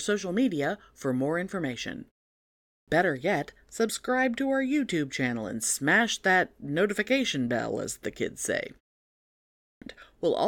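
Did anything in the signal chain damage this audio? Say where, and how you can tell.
Yes. At the playback stage, the output device appears to sleep during pauses. After "media for more information" and a 0.59 s gap, the sound at 2.62 s loses about 0.26 s of its onset. At 9.54 s, after 0.82 s of silence, about 0.28 s is lost. On the waveform, both onsets start abruptly out of silence, and the spectrogram lacks the energy of the opening sounds. This is a clipped start after a pause.

At the codec stage, compressed frames were skipped at 3.88 s, just before "to our". Roughly one frame was dropped, which fits a 23.2 ms frame length.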